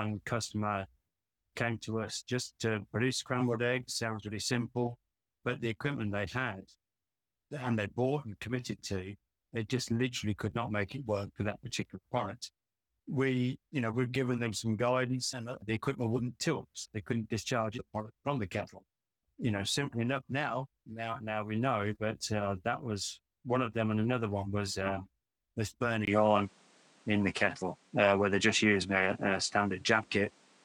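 After a 20 ms gap at 26.05 s, the sound turns dull, cut above 10.4 kHz, with new background noise: the input likely switched to a poorer device.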